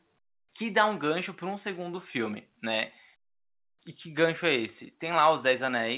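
No technical faults can be heard anywhere in the speech. It has come over a call path whose band stops at about 4 kHz, which fits the narrowband A-law coding used on ordinary telephone lines.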